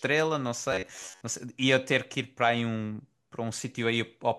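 From 0.72 to 1.23 s the speech turns into robotic sound from repeated short buffers: a rigid, metallic buzz near 94 Hz that only loosely tracks the syllables. The likely cause is audio arriving too slowly, so a slice of about 10.7 ms is replayed over most of that half-second while the real signal is skipped. A waveform shows identical repeating cycles, and a spectrogram shows flat, evenly spaced harmonic lines at multiples of 94 Hz.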